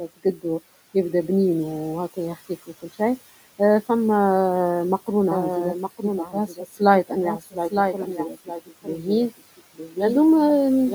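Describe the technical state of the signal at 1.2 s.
At 1.2 s a noise suppressor is acting on the speech, as it does for the whole clip. Frame by frame, it pulls down each frequency band it judges to be steady noise, cutting the room noise by about 16 dB. The room noise, which sits about 19 dB below the speech, drops away in the gaps between words and comes back up underneath them, so the background pumps in step with the talking.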